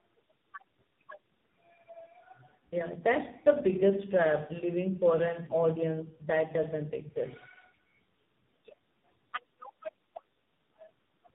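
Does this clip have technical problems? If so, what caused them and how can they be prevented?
Yes: tandem speech coding throughout, with nothing above 3.8 kHz and rough, muffled, warbly speech, which fits G.726 re-encoded into low-rate AMR-NB. Prevent it with transcoder-free operation, keeping one codec end to end.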